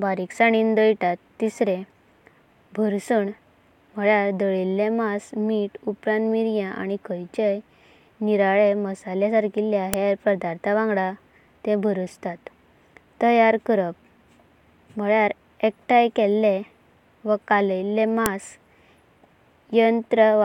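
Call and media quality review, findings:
File header played as audio at 9.94 s and 18.26 s in the speech: sharp, loud click at each point, independent of the signal. WAV segments joined or streamed with headers intact; header bytes decoded as samples. Probable component: concatenation/streaming stage.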